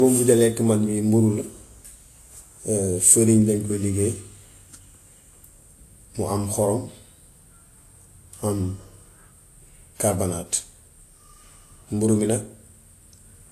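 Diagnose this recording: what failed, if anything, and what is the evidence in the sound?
At the codec stage, the speech was likely transcoded between lossy codecs: a low-rate encode fitting Vorbis near 34 kbit/s, then re-encoded as if by WMA 1 at 96 kbit/s. Throughout, nothing survives above 14.2 kHz, and the first codec's artefacts sit audibly beneath the second's.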